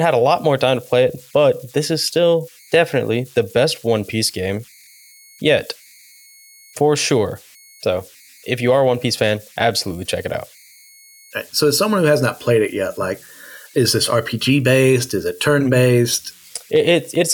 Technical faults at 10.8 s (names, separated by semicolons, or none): converter idle tones